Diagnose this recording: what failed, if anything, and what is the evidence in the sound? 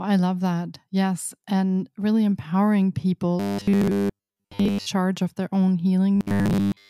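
The speech turns into robotic sound from repeated short buffers from 3.40 to 4.87 s, and again from 6.16 s to the end. In both spans the voice becomes a rigid, metallic buzz locked at 100 Hz. It still loosely tracks the speech. The stage is likely the driver or buffer. Audio arrived too slowly, so a 10 ms block was replayed in place of missing audio. Most of the real signal, around 70%, was skipped.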